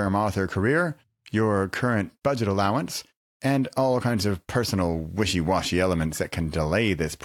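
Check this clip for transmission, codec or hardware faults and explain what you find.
Nothing turns up here: the speech has no faults worth pointing out.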